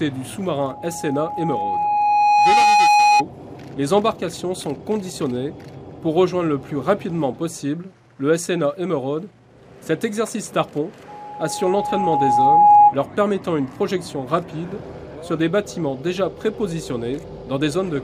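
A pure tone near 830 Hz swells out of the sound from 0.58 s, climbing for roughly two seconds to sit about 10 dB above the programme before it stops at 3.24 s. It returns at the same pitch from 11.08 to 12.95 s, rising faster this time, in around a second and a half, to about 15 dB above. This is loudspeaker feedback squeal: the microphone hears its own loudspeaker, and at 830 Hz the loop gain exceeds one, so that frequency keeps growing.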